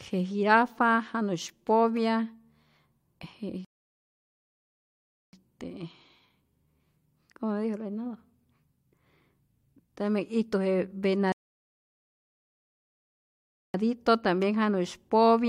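At 3.65 s the speech drops into dead silence until 5.33 s, then carries on exactly where it broke off; the same happens again from 11.32 s to 13.74 s. These are rebuffering stalls: the player used up its downloaded audio and halted until more data arrived. No speech is lost. The gaps simply add time, about 1.68 s for the first and 2.42 s for the second.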